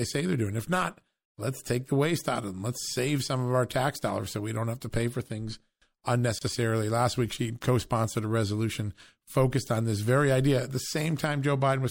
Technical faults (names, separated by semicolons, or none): gap at a join of encoded pieces